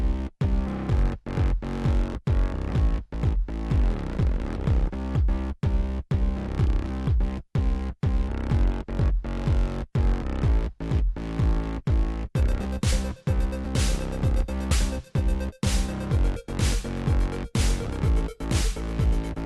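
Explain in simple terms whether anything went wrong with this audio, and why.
Twice the audio hops forward: once at 2.13 s, and again from 14.71 to 14.74 s. This is compressed frames skipped. The file stores sound in 20 ms chunks, and a few of those chunks never played, so a small slice went missing, roughly 70 ms the first time and about 40 ms the second.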